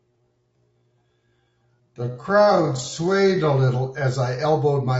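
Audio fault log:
throughout, low-delay AAC compression: The speech is plainly rough and grainy all the way through, with a hiss-like noise filling the gaps between the pitch harmonics and a thin, synthetic-sounding top band. This is likely AAC-ELD coding at a rate that fits about 32 kbps. Its short frames cannot separate the harmonics cleanly, so the coder smears noise across them. Ordinary AAC at the same rate would also dull the top band but would keep the voiced pitch structure cleaner.
0.0 to 3.5 s, time-stretched section: The opening 3.5 s run at about 0.61 times normal pace, yet the pitch stays where it belongs. The sound is drawn out and drags. This is likely the result of the audio being slowed by repeating short pieces of the signal. A tape-style slowdown would drop the pitch along with the pace, which is not what happens here. The abrupt change to normal pace at 3.5 s marks where the stretch ends.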